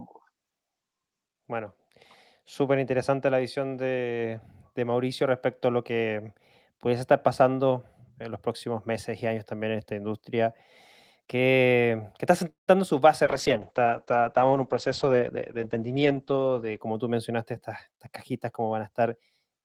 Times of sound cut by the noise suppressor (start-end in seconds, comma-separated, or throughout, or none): none